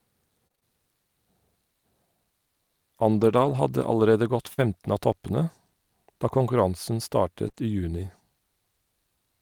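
Running through the whole clip there's sample clock jitter: the converter's clock wobbles by a couple of microseconds, so each sample lands a touch early or late. That timing error adds a faint hiss or grain, roughly 40 dB under the speech, strongest on loud, bright sounds and gone in the pauses.

Between 0.47 and 4.64 s come scattered short gaps, around five of them, adding up to 120 ms missing, the longest about 50 ms. Each hole was papered over by extending the previous sound, so you get little ticks and smears across a speech stretch that's still clear.

At 7.48 s and again at 7.52 s there's short concealed packet loss, two back-to-back 20 ms holes. The decoder kept the preceding sound going and blended back in, which comes across as a brief wobble or smear right before "i juni".

At 7.56 s, just before "i juni", one lost packet was rebuilt from error correction: the following packet carried a low-bitrate copy of it, so 20 ms plays without a gap but sounds rougher and noisier than the audio around it.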